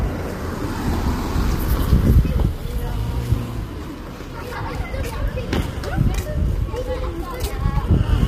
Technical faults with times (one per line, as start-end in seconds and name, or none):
0.00-8.27 low-delay AAC compression